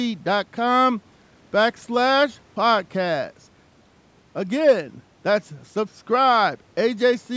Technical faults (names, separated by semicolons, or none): none